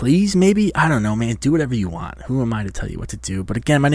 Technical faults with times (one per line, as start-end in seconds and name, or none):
none